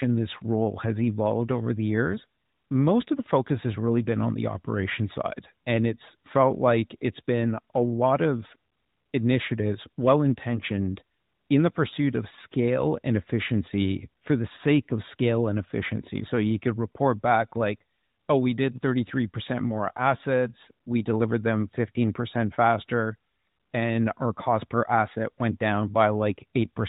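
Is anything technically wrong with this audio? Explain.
No, nothing technical stands out here: it's just speech carried with the narrow, phone-call sound of a mobile line, which is how that kind of connection is meant to sound.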